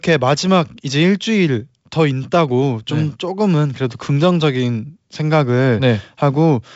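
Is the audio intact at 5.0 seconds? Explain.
Yes, the audio is intact at 5.0 seconds, with the speech coming through the G.722 wideband telephone coding at 64 kbit/s and its band ending at about 7.7 kHz.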